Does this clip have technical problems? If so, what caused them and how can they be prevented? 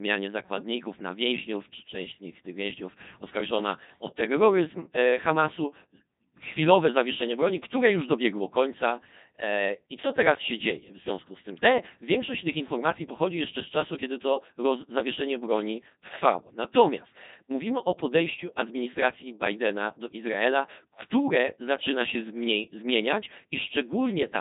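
Yes. For the full length, the speech has gone through the Codec 2 vocoder, which transmits only pitch, voicing, energy and a coarse spectral envelope and then rebuilds the voice from sine waves instead of preserving the waveform. The damage is heavy: the speech sounds robotic and buzzy, nothing remains above 3.8 kHz, and the degree of loss fits a low 2.4 kbit/s mode. To prevent this, send the audio over a waveform codec at a higher bitrate.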